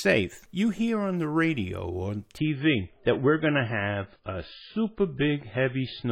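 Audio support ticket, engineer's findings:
Adaptive stream at a lower bitrate, 2.38 s to the end of the clip. The speech goes dull all at once, with nothing above 5 kHz and smeary, swirly codec artefacts, but no gap. Likely the player dropped to a cheaper MP3 rendition when the connection slowed. The sound points to roughly 128 down to 16 kbit/s. Worth checking the player's switching logic.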